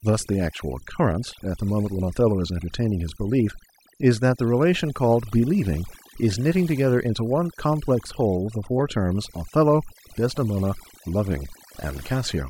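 From start to finish, overdone noise removal: a noise reduction stage was pushed too hard, cutting individual frequency bands close to its noise estimate and taking the quieter parts of the speech with them. The gaps fall to near silence sprinkled with twinkling specks.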